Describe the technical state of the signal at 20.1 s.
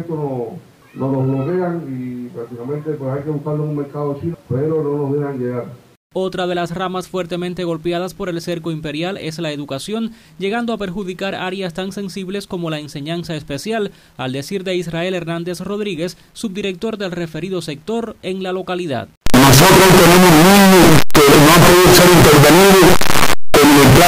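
At 20.1 s, 8-bit samples are likely being read with signed and unsigned mixed up, flipping the top bit so every zero crossing leaps across the full range. From 19.26 s to the end, this produces loud, harsh distortion, with quiet passages as loud as the rest.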